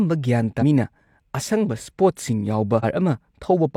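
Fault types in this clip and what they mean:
Damaged data in a compressed stream: a couple of spots where the encoded data itself got mangled, so the decoder misreads those frames, loses sync and hunts for the next valid frame header. In this speech clip it comes through as two short glitches, one at about 0.58 to 0.63 s and another at about 2.80 to 2.85 s, each lasting roughly 50 ms, where the sound briefly breaks up.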